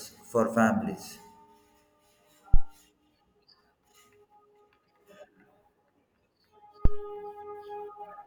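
At 2.54 s and again at 6.85 s there's a phantom power thump, a supply switched on or off on a live input, its step kicking through the coupling capacitors. You get a deep thud peaking about -7 and -8 dBFS, dying away in 15 and 46 ms.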